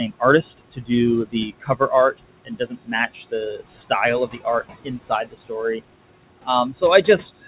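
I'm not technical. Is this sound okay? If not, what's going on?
No. Throughout, the background noise dips between phrases and swells back under them. These are noise suppressor artifacts, from a filter scrubbing away steady room noise frame by frame.

Parts of the speech also sound swallowed or faint, at 0.57 to 0.91 s, 1.25 to 3.91 s, 4.27 to 4.46 s, 4.77 to 5.82 s, and from 6.38 s to the end. This is speech cut by the noise suppressor, which mistook quieter sounds for noise and turned them down too.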